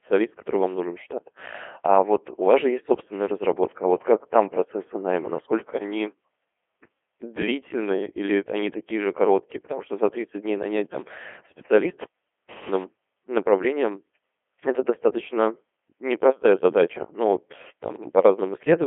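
Throughout, the speech passes through a Codec 2 vocoder. It is rebuilt from sine waves, so it sounds robotic and buzzy, consistent with 2.4 kbit/s. Nothing is heard above 3.5 kHz.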